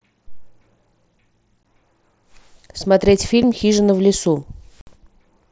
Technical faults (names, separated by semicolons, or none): unconcealed Bluetooth headset packet loss